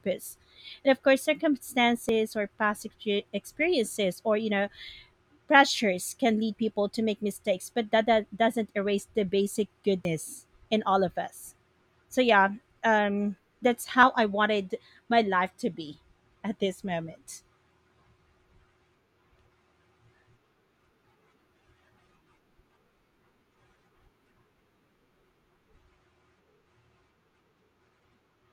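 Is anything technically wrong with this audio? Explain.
Yes. Short skips at 2.09, 6.07, 10.05, 14.03 and 21.99 s each cut roughly 20 ms and join with no silence. This is audio missing between chunks, likely lost as one 4-second chunk closes and the next opens.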